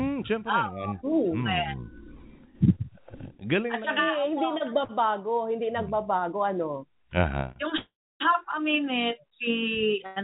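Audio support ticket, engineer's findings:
Short stall from a late packet, 7.52 s and 10.06 to 10.18 s: sound held too long with a faint buzz or dip, about 30 ms then 100 ms of fill. The jitter buffer ran dry briefly and then resumed in place. Nothing lost, unlike a dropout.

Call audio freeze, 7.77 to 8.22 s: 431 ms inserted gap. The held sound fades as a buzz or hiss into about 300 ms of silence, then resumes where it stopped. Far longer than the stalls and ending in true silence. Likely packets held up in transit starving the jitter buffer.

Call path band-limited to 4 kHz, which fits G.711 mu-law at 64 kbps.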